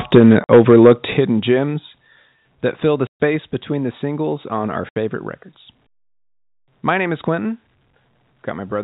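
Microphone overload, 0.14 to 0.92 s: the loudest syllables in this opening stretch carry a harsh, crackly edge because their peaks are flattened at the converter's ceiling. The signal runs about 7 dB past full scale, and a fair share of the waveform is squared off. The likely cause is an input volume set too high on the talker's microphone, so the peaks simply have nowhere to go.

Microphone volume stepped down, at 0.18 s, 1.17 s, 2.19 s and 3.36 s: speech and background together drop abruptly in level, by about 3 dB, 8 dB, 3 dB and 2 dB respectively. The first step lands inside the distorted passage, and the 3.36 s step falls just after the words "that fill the" and the gap that follows them. This is likely the call software reacting to the overload by cutting the device's input gain in single jumps rather than smoothly.

Packet loss filled with silence, at 0.44 to 0.48 s, 3.07 to 3.17 s and 4.89 to 4.96 s: the sound is chopped by dead holes of about 50 ms, 130 ms and 70 ms, each with hard edges where the waveform is cut off. 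The longest falls between "that fill the" and "between the singles on", and the last comes right after "the singles on our". Durations in steps of 10 ms fit 10 ms packets, with the receiver inserting silence where audio never arrived. The G.711 A-law telephone coding itself is heard as the expected narrow band topping out at 4 kHz.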